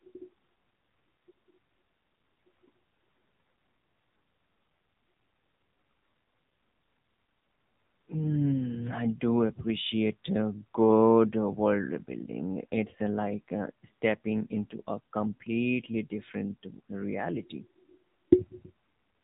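AMR narrowband mobile codec damage runs through the whole clip. The speech has been squeezed through a low-rate vocal-tract model, with nothing above 3.8 kHz, leaving it muffled and plainly buzzy and synthetic, which fits a setting around 7.4 kbps.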